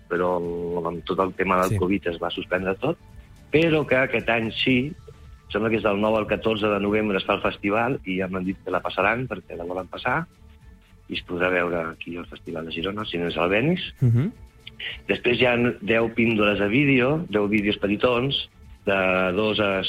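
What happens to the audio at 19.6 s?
Nothing goes wrong at 19.6 s; the audio plays through that moment intact, with no dropout, click or distortion.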